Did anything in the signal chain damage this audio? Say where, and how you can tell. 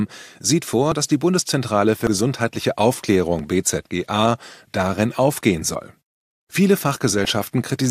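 Yes. At 2.07 s and 3.39 s the sound skips ahead, losing about 70 ms and 20 ms, likely a dropped buffer (overrun) at the driver.

From 7.22 to 7.31 s there is DAB burbling: weak reception let a few bit errors into the MP2 data, so wrong samples put short blips of noise in single sub-bands.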